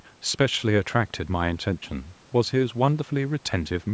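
Nothing stood out on listening to this speech, which carries the usual call microphone processing with the lowest bass trimmed and nothing above 8 kHz.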